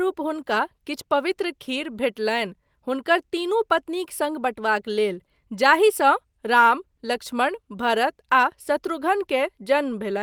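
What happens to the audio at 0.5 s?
Nothing goes wrong at 0.5 s; the speech there runs on intact, with no dropout, click or distortion to be heard.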